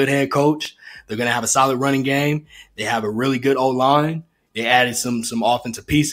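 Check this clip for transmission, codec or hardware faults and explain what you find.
One fault stands out, an electrical switching spike at 0.65 s. A sharp snap, peaking around -10 dBFS and lasting only a few milliseconds, lands on top of the speech. It is likely caused by a nearby switch, motor or static discharge arcing briefly and coupling into the audio line.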